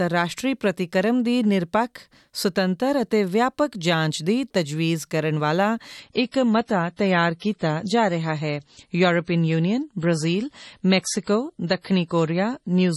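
At about 6.00 s the audio drops suddenly into an adaptive stream at a lower bitrate and stays there to the end, with no gap at the switch. The top end is cut off at 11.4 kHz, and artefacts rise, consistent with a step down from around 128 kbit/s MP3 to roughly 32 kbit/s. That's the player falling back to a cheaper rendition when the connection slowed.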